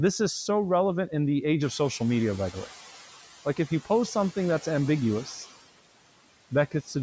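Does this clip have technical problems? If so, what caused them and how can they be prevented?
Yes, there are two noise suppressor faults here.

Noise suppressor artifacts run through the whole clip. The suppressor estimates the steady room noise and pulls those bands down by about 13 dB, frame by frame. So the background drops away in the gaps and comes back up underneath the speech. The room noise steps up by about 10 dB around 1.5 s, though it still sits about 18 dB below the speech. To prevent this, cut the noise at the source with a closer mic or quieter room, so the suppressor can run gentler settings.

Speech cut by the noise suppressor happens right at the end, between 6.71 and 6.96 s. The suppressor mistook part of the speech for noise and turned it down along with the background, by about 12 dB at the deepest point, across roughly a tenth of a second in total. That bit sounds swallowed and faint compared with the speech around it. 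To prevent it, lower the suppression strength or give the speech more level above the noise so quiet tails aren't misread as background.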